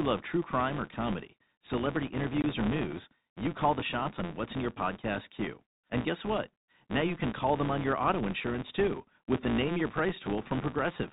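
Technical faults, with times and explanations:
Throughout: filter restarted on every block. The filter drops its state at each block boundary and starts from zero, so every block opens with a small transient. You get a steady buzz at 172 Hz that rises and falls with the speech level, which fits a 256-sample buffer.
2.42–2.44 s: packet loss filled with silence. About 20 ms of the speech just drops out to dead silence, which points to one lost packet with nothing concealing the gap. The edges on either side are hard, and the speech around it has the band-limited G.711 telephone sound.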